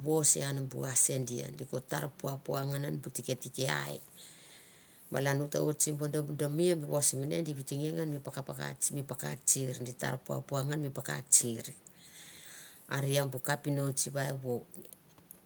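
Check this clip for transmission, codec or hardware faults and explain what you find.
Nothing turned up on a listen through this speech recording; there's no sign of trouble from the transmission path, the encoding or the equipment.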